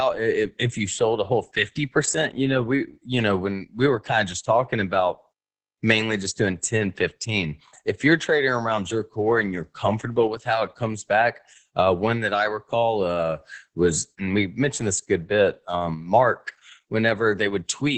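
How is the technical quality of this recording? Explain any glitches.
The technical quality is poor: heavy Opus voice compression runs through the whole recording. The encoder is working at a very low bitrate, which points to around 10 kbps, in its SILK speech mode at wideband, so nothing above about 8.6 kHz survives. The linear-prediction model keeps the broad shape of the speech, but its excitation is coded coarsely. The result is muffled, dull speech with a hoarse, slightly robotic grain.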